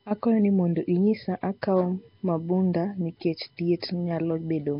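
From start to finish the speech carries a USB whine: a steady tone at 1 kHz, loudest at its 3 kHz harmonic, sitting roughly 40 dB below the speech. Ground or power current from 1 ms bus frames causes it. Its pitch is fixed at kHz multiples, which rules out mains hum.

Also throughout, the speech sounds rough and smeared, with a hissy halo and nothing above 5.3 kHz. This is likely heavy Nellymoser compression: starved bands are filled with noise instead of being dropped, which fits a bitrate near 22 kbps and sets it apart from ordinary low-bitrate warbling.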